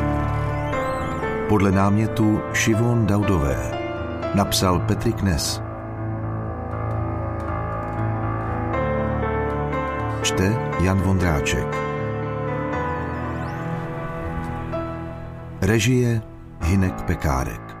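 Nothing technical stands out here; the audio runs along without any glitch, dropout or distortion worth pointing to.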